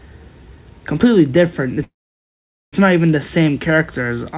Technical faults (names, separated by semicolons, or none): call audio freeze